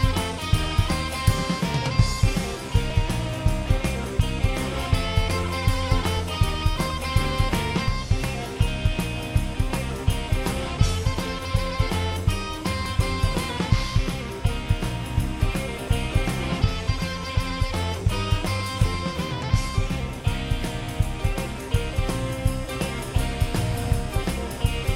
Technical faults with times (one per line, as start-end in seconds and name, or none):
7.88 audio missing between chunks
12.86 audio missing between chunks
17.83 audio missing between chunks